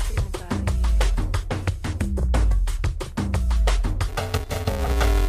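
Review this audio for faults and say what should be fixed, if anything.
From 4.08 s to 5.28 s the sound turns into a robotic buzz at about 345 Hz with no clear octave shift. This is planar audio read as interleaved. Each 2.9 ms block, which fits 128-sample blocks, stores all left samples and then all right samples, but it is read as alternating left-right pairs. Every block therefore plays twice at double speed, and the block rate becomes audible. To prevent it, make sure the channel layout flag for planar versus interleaved matches the data at every handoff between decoder, converter and output buffer.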